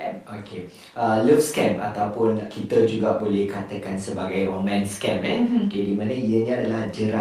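No technical faults can be heard anywhere in the speech recording. Nothing in the signal draws the ear to a problem at any moment, so there is no event to place in time.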